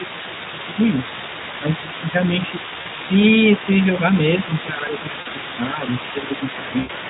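Right from the start and through the whole clip, the speech has that hoarse, grainy Speex codec sound, with a noise-like top end, consistent with a setting around 11 kbps. Underneath sits a fainter second voice, about 15 dB down, which is likely the other side's voice leaking through from a loudspeaker the echo canceller didn't fully cancel. At 0.52–0.72 s, 1.6–1.65 s, 1.83–2.16 s, 4.47–5.38 s and 5.58–5.85 s the main voice dips by a few dB, likely speech suppressed in double talk while both sides overlap. At 2.81–2.87 s, 5.21–5.27 s and 6.79–6.92 s there's VoIP packet loss concealed by the speech codec. The first two gaps are about 40 ms each and the last about 100 ms, each smeared into a fading sound that stays weak briefly afterwards.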